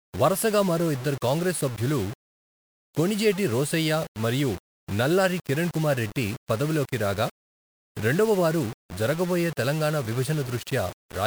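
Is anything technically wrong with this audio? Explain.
Yes. Grainy distortion runs through the whole speech clip and changes with the sound. The likely cause is low bit depth without dither. Samples were rounded to very few levels, which fits about 5 bits. The error follows the signal at roughly 20 dB below it, so quieter stretches sound gritty.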